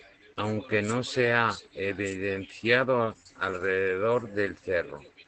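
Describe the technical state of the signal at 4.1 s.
At 4.1 s you're hearing Opus voice compression, which runs through the whole clip. The SILK coder is working in wideband here, so nothing gets through above about 8.6 kHz, and its coarse excitation coding makes the speech plainly muffled, a bit hoarse and slightly robotic. That fits a low bitrate around 12 kbps.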